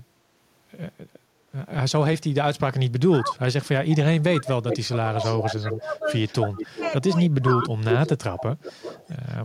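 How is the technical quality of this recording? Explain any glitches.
The recording has two clear faults, both typical of a hands-free call.

Speech suppressed in double talk: from 3.09 to 6.85 s, and from 7.22 to 7.63 s, the speech is turned down. The deepest dips are about 25 dB. About three seconds are hit in the first stretch. The likely cause is an echo canceller muting the talker while the other side also spoke.

Echo leak: a delayed copy of the speech returns 353 ms late at 4.70 to 5.77 s, 6.27 to 6.92 s, 7.63 to 7.69 s and 8.02 to 9.16 s. It sits about 10 dB below the speech, and about 15 dB below in the last stretch. It is likely loudspeaker sound that reached a microphone and got past the canceller.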